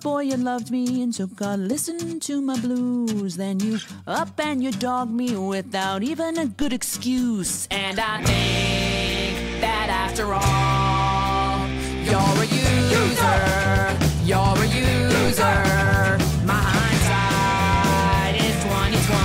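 At 6.62 s and again at 15.26 s the waveform's zero line jumps abruptly, a DC step of about -20 dBFS each time. The offset doesn't hold. It bleeds away as a 2 Hz high-pass response pulls the baseline back to zero over a fraction of a second. Each jump comes through as a short low thump or click, while the sound itself carries on unaffected beneath it.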